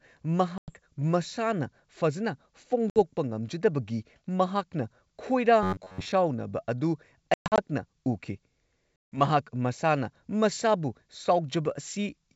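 Packet loss on an ADPCM call drops audio at 0.58 to 0.71 s (100 ms missing, roughly five packets) and 2.90 to 2.98 s (60 ms). The gaps fill with hard-edged silence, and the decoder's predictor and step size drift from the sender's, so speech resumes slightly distorted.

From 5.63 to 6.12 s the player likely runs short of fresh audio and repeats its last buffer for around two thirds of the stretch. Looping every 10.7 ms stamps a rigid 93.8 Hz metallic buzz over the speech.

The same ADPCM packet loss returns at 7.34 to 7.61 s, with 180 ms lost in pieces across 240 ms (longest run 120 ms), and at 9.06 to 9.21 s (160 ms). Each leaves abrupt holes and a brief distorted re-entry over the 64 kbit/s G.722 wideband sound.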